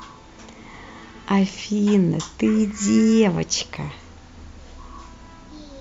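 A handful of samples, likely lost in the transfer of the stream, went missing at 2.71 s and again at 3.77 s, so each time the waveform skips straight to a later value. These dropped samples span only about a tenth of a millisecond, far too little to remove any of the speech, but the sudden step is heard as a single sharp click at each point, a thin vertical line across the spectrum.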